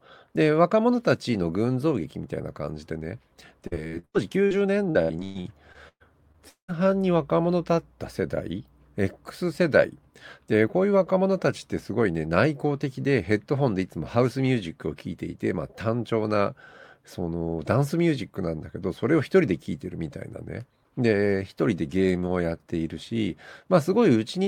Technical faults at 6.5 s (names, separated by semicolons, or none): repeated packet loss (robotic sound)